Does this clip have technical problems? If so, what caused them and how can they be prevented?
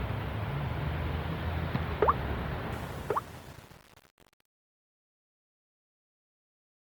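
Yes. Throughout the clip, tonal parts of the sound turn grainy and rough, with a noisy texture where detail should be, while the bandwidth stays full up to about 20.2 kHz. The likely cause is Opus compression in its CELT music mode at around 24 kbps, where too few bits force the encoder to fill bands with folded or noise-like content instead of the real spectrum. Encoding at a higher bitrate, or keeping an uncompressed master, prevents this.

From 2.72 s to the end at 6.81 s, the fade-out turns gritty as it nears silence. This is truncation distortion on a fade: the level stage kept only about 7 bits without dither, so the quiet tail collapses into coarse square steps. Applying the fade at full word length and adding dither before any reduction in bit depth prevents it.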